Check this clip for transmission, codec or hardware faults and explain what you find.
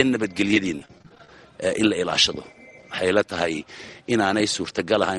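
Repeated packet loss (robotic sound) from 0.48 to 1.29 s: over a dozen brief dropouts, each under 25 ms, are bridged by extending prior audio, producing choppy sound with pieces missing.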